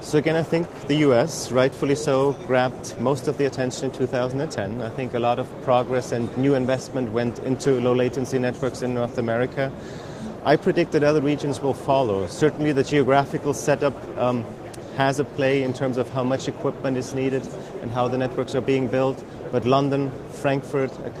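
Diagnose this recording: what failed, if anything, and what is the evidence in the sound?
Nothing failed: no stage from capture to playback leaves any audible trace of a fault, so there is nothing to diagnose.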